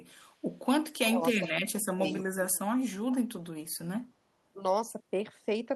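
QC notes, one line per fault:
1.06–2.13 s and 2.38–2.56 s, speech suppressed in double talk: the speech dips and cuts out in pieces, for roughly 0.7 s in the first stretch with drops of around 40 dB at the deepest, then for about 0.2 s with drops of around 20 dB. The likely cause is an echo canceller that could not tell this talker from loudspeaker echo while the far side spoke, so it turned both down.
1.38–1.53 s and 2.18–2.26 s, echo leak: short, faint scraps of the speech return 312 ms late, about 15 dB below the direct speech in the first burst and about 25 dB below in the second. The likely cause is a far end on loudspeaker whose echo canceller let part of the sound from its microphone slip through and sent it back down the line.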